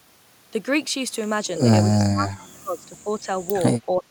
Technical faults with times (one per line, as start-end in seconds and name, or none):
1.90-3.30 speech suppressed in double talk
3.86-4.10 speech suppressed in double talk